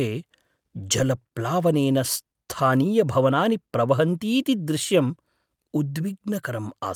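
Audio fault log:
No faults detected anywhere in the speech.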